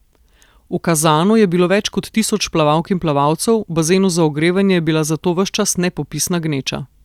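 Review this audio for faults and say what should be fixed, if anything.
No faults; nothing to fix.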